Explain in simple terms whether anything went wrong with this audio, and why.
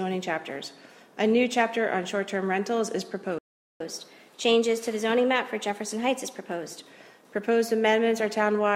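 Two things went wrong, one right after the other.

First, a playback stall. The player most likely ran short of incoming data, or its processing was held up, so it had nothing to send to the speakers. You hear the sound simply stop at 3.38 s and stay silent until 3.80 s, a gap of about 0.42 s, before it carries on. That pause in the middle of the flow is what gives the fault away.

Then comes catch-up at higher speed. Having fallen behind, the player tries to make up the lost time by running its waiting audio faster than normal, 1.1 times the usual speed, from 3.80 s to 6.80 s. Because it speeds up by squeezing the sound rather than skipping any, the pitch rises too, by roughly a semitone and a half. For those three seconds everything sounds slightly hurried and higher, then it settles back to normal.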